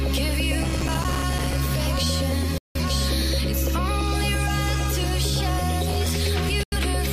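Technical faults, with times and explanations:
0.60–1.58 s and 5.88–6.09 s, processor overload crackle: the processor kept missing its deadlines for very short buffers, about 3 ms each. Each miss left a tiny hard-edged hole of silence. Dozens of holes in the first burst and roughly ten in the second run together as gritty crackle that stops once the load eases.
2.58–2.80 s and 6.63–6.77 s, digital broadcast dropout: the receiver lost good frames and muted, fading to silence within about 3 ms. The gaps of about 171 ms and 85 ms fit four and two lost frames, and the sound that was sent during them is gone.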